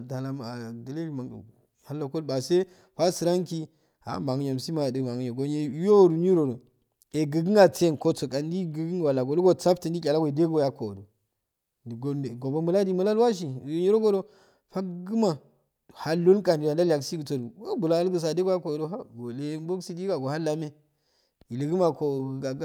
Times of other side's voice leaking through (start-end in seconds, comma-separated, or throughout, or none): none